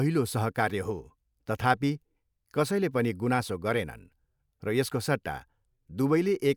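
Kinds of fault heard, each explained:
No technical faults can be heard in this speech recording; the signal holds steady throughout, with no dropouts, distortion, or interruptions.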